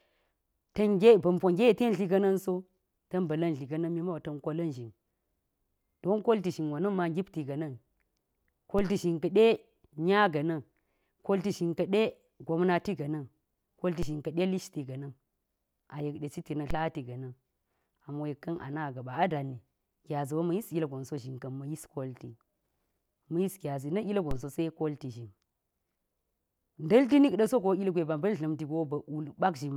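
At 8.79, 14.03, 16.71 and 24.31 s, the speech carries a DC step. The waveform's zero line suddenly jumps, by about -23 to -22 dBFS. Each jump is a low thump. The offset then decays away, as through a 5 Hz high-pass. The speech continues unchanged.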